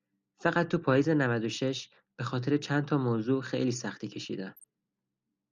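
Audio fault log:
4.57 to 4.64 s, DAB burbling: a short burst of burbling over the speech. It sounds like weak reception let bit errors, somewhere around 0.2 percent, slip past the error correction into the MP2 data. Corrupted samples put short noise blips into single sub-bands. The 70-odd ms of damage fits roughly five frames getting hit.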